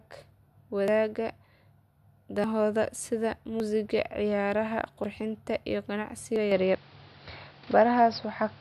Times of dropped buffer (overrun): 0.88, 2.44, 3.60, 5.04, 6.36

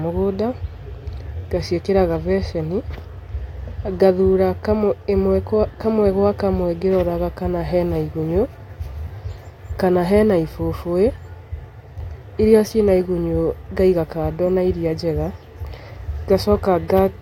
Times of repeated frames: none

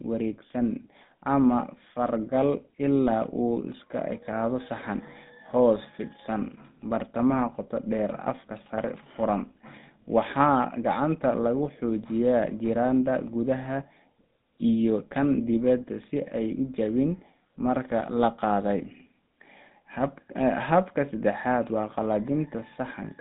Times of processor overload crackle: none

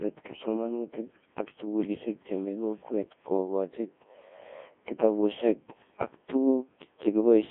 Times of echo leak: none

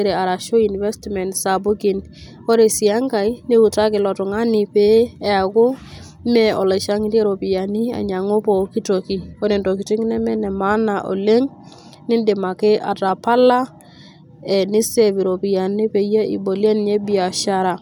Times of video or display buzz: none

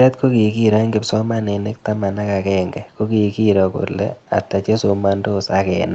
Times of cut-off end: none

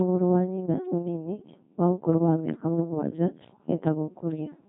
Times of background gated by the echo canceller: none

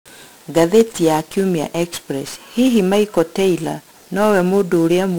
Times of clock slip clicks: 0.14-5.16

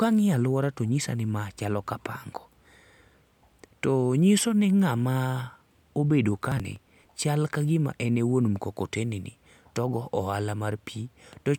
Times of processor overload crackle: 6.52-7.11

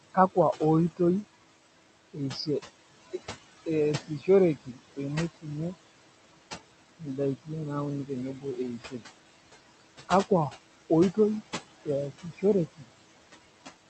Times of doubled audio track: none

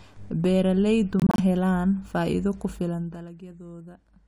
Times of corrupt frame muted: 1.20-1.40

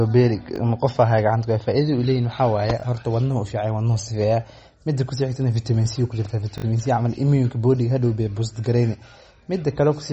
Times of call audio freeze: none

